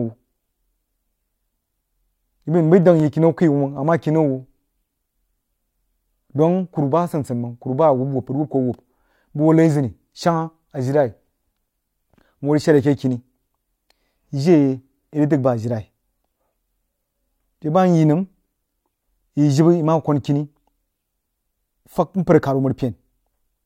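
At 3.00, 15.02 and 21.04 s the speech has overlapping chunks: the audio was handled in 6-second blocks, and each new block began about 13 ms before the previous one ended, so that sliver plays twice at the join. It sounds like a click or stutter. Unlike a dropout, no audio goes missing; the material is doubled. Its lock to 6-second spacing separates it from random clicks.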